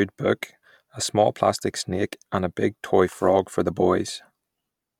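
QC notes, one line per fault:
No technical faults were found in this speech recording's signal path.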